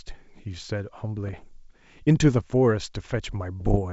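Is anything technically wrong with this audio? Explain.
Yes. Bit errors on an ADPCM link strike twice, from 1.25 to 1.44 s and from 3.60 to 3.79 s, at a rate of well under one percent. Corrupted bits throw the 64 kbit/s G.722 decoder's step size and predictor off track, so each flip rings on briefly, producing pops, rough bursts and short jumps in level.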